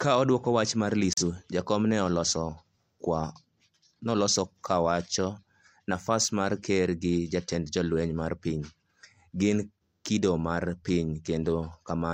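At 1.13 s there's a digital broadcast dropout: the receiver muted on a bad frame, leaving a brief hole until 1.23 s that fits one lost frame of about 43 ms.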